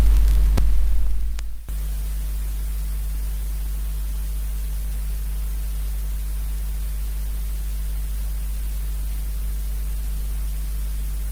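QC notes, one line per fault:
No faults to note.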